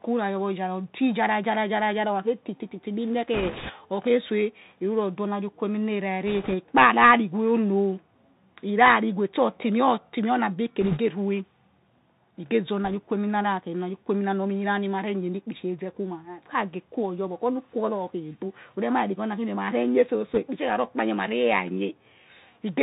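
Throughout, the speech runs through a Bluetooth CVSD headset codec. Its one-bit up-or-down coding, which fits a 64 kbps link, cuts everything above 4 kHz. Its adaptive step lags on loud high sounds, so s sounds turn scratchy over a steady granular hiss.

Bit errors on a Bluetooth voice link then flip bits at 3.34–3.72 s, 6.27–6.55 s, 10.81–10.99 s, 12.85–12.95 s and 20.34–20.39 s. Each bit carries little weight, so instead of clicks these bring a rushing crackle. It is heaviest in the first burst and faintest at 12.85 s.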